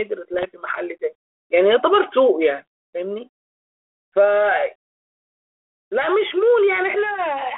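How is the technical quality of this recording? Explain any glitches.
The speech comes through a narrow telephone band of about 300 Hz to 3.5 kHz, with light G.726 ADPCM coding that fits 32 kbit/s. One glitch stands out. From 0.34 to 0.45 s there are bit errors on the ADPCM link. A small fraction of the bits arrive flipped. Each bad bit throws off the decoder's step size and prediction, so the error rings on briefly. It sounds like pops and a rough, crackly burst with quick jumps in level.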